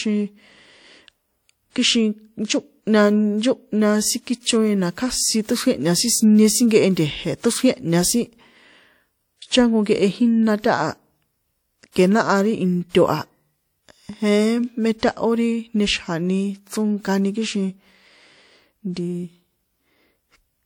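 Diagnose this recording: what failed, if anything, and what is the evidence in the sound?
The codec stage failed, showing pre-echo: a short hiss leads the attack at 11.92 to 11.96 s, just before "ke náha ri", and at 12.89 to 12.95 s, just after it, spanning 44 and 53 ms. Block-spread quantisation noise precedes each onset, unlike room echo, which trails it.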